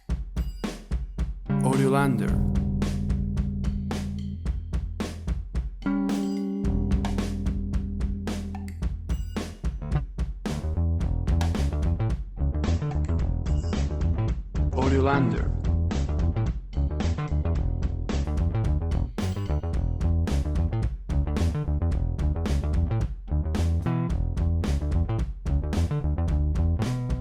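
Adaptive stream at a lower bitrate, from 12.25 s to 18.24 s: the player switched to a leaner version of the stream for about six seconds, then stepped back up. The change arrives abruptly with no gap in playback. Across that stretch nothing remains above 8.1 kHz, so the sound turns dull, with heavier codec artefacts, which fits a fall from roughly 64 kbit/s to 16 kbit/s Opus.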